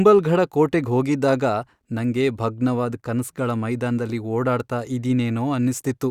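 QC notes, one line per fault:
Nothing stood out on listening to the speech in this clip.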